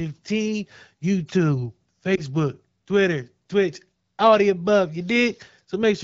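From 2.15 to 2.21 s there is a lost AMR speech frame: a radio error corrupted one frame, and the decoder covered the gap by repeating the previous frame's pitch and vocal tract settings at reduced gain. It sounds like a brief dip or warble, about 20 ms long, which fits a single lost frame. On the waveform the amplitude sags briefly. On the spectrogram the harmonics smear flat for that instant in the wideband image, before fresh detail returns.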